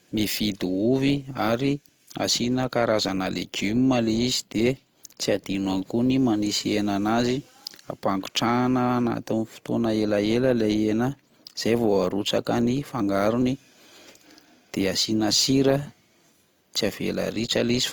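From start to finish the speech carries plainly audible Opus compression damage, most likely from an encode at a low rate, with the grainy texture fitting something around 24 kbps in Opus's CELT music mode. The band energies are held, so there's less of the swirly, holey MP3 sound; instead the thin bands get filled in, and the voice comes out rough, noisy and gritty. Bandwidth stays full, reaching up to about 20.2 kHz.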